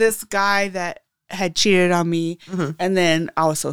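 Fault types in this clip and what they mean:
No technical faults can be heard in this speech recording. There is nothing to list for any part of it.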